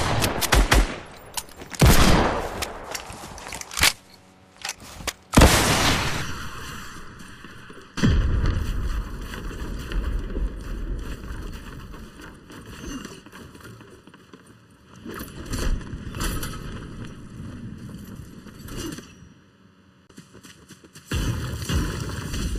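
From 6.22 s to the end, one channel runs late by about 0.7 ms before the two are summed to mono, producing channel delay (comb filtering). Because the copies are offset so slightly, the content they share cancels at a series of evenly spaced frequencies, the first notch falling around 700 Hz and the rest repeating at regular steps above it. The audio turns hollow and phasey, with fixed holes in the spectrum.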